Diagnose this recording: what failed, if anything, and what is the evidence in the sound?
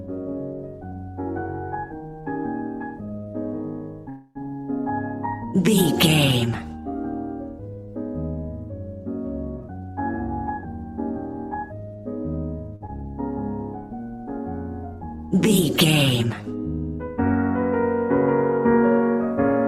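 Call audio freeze, 4.09 to 4.37 s: the sound stretches into a fading buzz for about 0.26 s and then resumes, likely a network hold-up draining the jitter buffer.

Jitter buffer speed-up, 9.57 to 10.69 s: the audio runs about 123% fast at unchanged pitch while the buffer discards roughly a third of a second of backlog.

Short stall from a late packet, 12.76 to 12.82 s: a 48 ms hold with a slight buzz, as the network-side buffer briefly emptied and the last sound was extended.

Short concealed packet loss, 12.86 to 12.90 s: a brief smear where about 20 ms never arrived from the network and was patched with continued sound.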